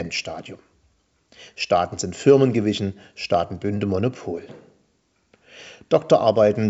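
No technical faults occur anywhere in this speech, which is carried over G.722 wideband telephone coding at 64 kbit/s.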